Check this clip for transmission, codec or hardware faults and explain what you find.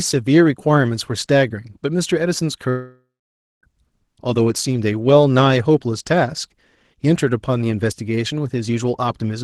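One transmission fault stands out in this speech clip: a long network dropout. The audio around it carries the coding noise and roughly 12 kHz upper limit of a call codec, which fits Opus at around 20 kbps.

Long network dropout, 2.69 to 3.64 s: the speech stops and a stretch of about 0.94 s is missing. This is most likely a run of packets that never reached the receiver. The concealment stretches the last sound into a buzzy tone that fades, leaving roughly half a second of near-silence before the speech resumes further on, with the lost part gone.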